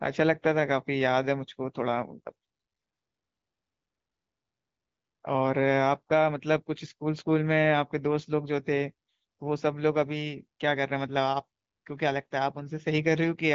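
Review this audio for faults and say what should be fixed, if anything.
Nothing here needs fixing. The speech has the light coloration of the AMR wideband (HD Voice) codec, with no content above about 7.7 kHz, which fits a rate of around 15.85 kbit/s.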